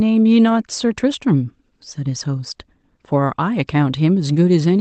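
Nothing faulty can be heard anywhere in this speech.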